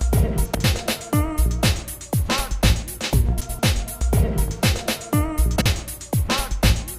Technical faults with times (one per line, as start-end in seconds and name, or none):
0.45-0.64 frames out of order
3.40-3.60 frames out of order
5.56-5.66 frames out of order